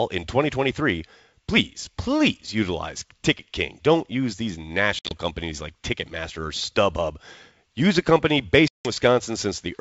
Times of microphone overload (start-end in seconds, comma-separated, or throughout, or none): none